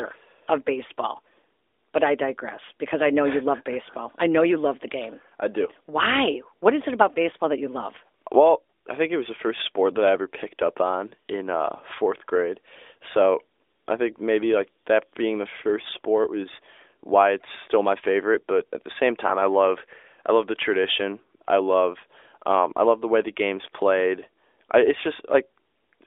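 Nothing's actually wrong here: it's just speech coming down a mobile line through the AMR narrowband mobile codec, squeezed into the usual 300 Hz to 3.6 kHz telephone band with a sound that fits the codec's 12.2 kbps mode.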